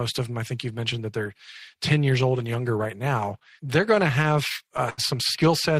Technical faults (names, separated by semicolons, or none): repeated stalls (stutter)